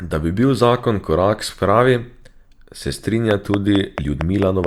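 Speech clip with a train of clicks from 3.31 to 4.65 s: about seven evenly spaced ticks at 4.5 per second, well above the speech, likely interference or a faulty connection or power supply.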